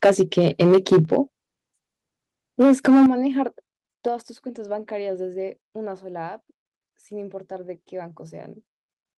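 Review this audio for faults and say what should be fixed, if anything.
The loudest syllables from 0.04 to 1.17 s have a harsh, crackly, gritty edge, and the same rasp returns from 2.6 to 3.06 s. The cause is likely microphone overload. The input was driven past the converter's ceiling, by about 9 dB in the first stretch and about 6 dB in the second, so the waveform tops are sheared flat. Only a small share of samples is flattened early on, but nearly a third are flattened in the later burst. To prevent it, set the input level so that peaks stay several decibels below full scale.

Sudden drops in level, affecting the speech and the background together, occur at 0.06 s (about 2 dB), 1.05 s (about 5 dB) and 3.06 s (about 9 dB). The last drop lands exactly where the second distorted burst ends. This is likely the microphone volume being stepped down: the call software, reacting to the clipping, cut the device's input volume in single jumps rather than gradually. 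To prevent it, disable automatic microphone gain adjustment once a safe input level has been set by hand.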